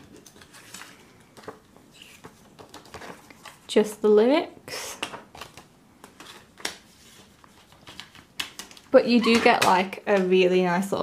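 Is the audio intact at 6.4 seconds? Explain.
Yes, the audio at 6.4 seconds is intact, with no dropout, click, distortion or other fault at that moment.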